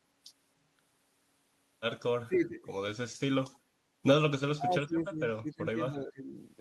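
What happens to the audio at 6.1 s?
The echo canceller likely mistook overlapping talk for echo and clamped down, so 6.1 s falls inside speech suppressed in double talk, running from 5.42 to 6.35 s. The speech dips by roughly 20 dB and breaks into fragments, affected for about 0.7 s overall.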